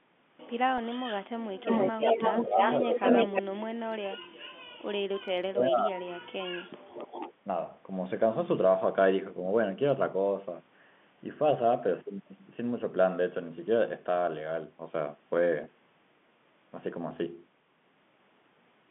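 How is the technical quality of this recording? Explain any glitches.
The recording has three kinds of glitch, clustered in the first seven seconds with one brief dropout near the end. The speech itself travels over a narrow telephone-style channel of roughly 150 Hz to 3.5 kHz, as you would expect from G.711 A-law coding.

Echo leak occurs from 1.63 to 3.42 s and again from 6.94 to 7.34 s. A delayed second copy of the speech trails the original by 310 ms in the first stretch and by 220 ms in the second. The first copy is about as loud as the speech itself, and the second sits about 15 dB lower. The likely cause is a loudspeaker on one side whose echo canceller let part of the microphone pickup through and sent it back. Reverberation smears sound continuously, but this is a distinct, later repeat.

Speech suppressed in double talk occurs from 1.92 to 2.66 s, from 2.85 to 4.18 s, and from 5.51 to 6.17 s. 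The speech dips or cuts out in pieces while the echo overlaps it. The first dip is modest, around 15 dB. The later two go much deeper, roughly 30 dB, for about a second and under a second respectively. This is likely an echo canceller that could not separate the talker from the returning echo and turned both down. A network dropout would sound different: it leaves a clean gap, whereas these losses follow the overlap.

Packet loss with pitch repetition occurs from 15.64 to 15.66 s. About 20 ms of audio went missing. The receiver bridged the gap by repeating the last pitch period, so you hear a slightly held, buzzy tone rather than silence or a click. The gap is too short for the repeated sound to fade out. That buzzy hold, instead of a level drop, is what separates it from the suppression dips earlier in the clip.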